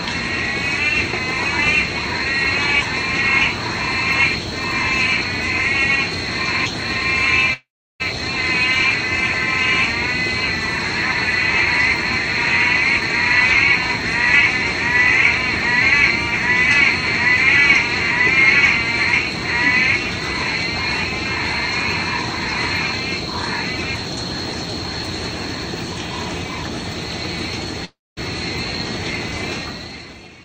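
At 7.53 to 8.02 s and again at 27.85 to 28.19 s there is a call audio freeze, likely from delayed packets emptying the jitter buffer. The last sound smears into a fading buzz and then about 350 ms and 230 ms of silence before resuming where it stopped. From 29.85 s to the end, a jitter buffer speed-up trims about 70 ms of short pitch-period slices, so the sound runs at 112% speed with unchanged pitch and feels hurried.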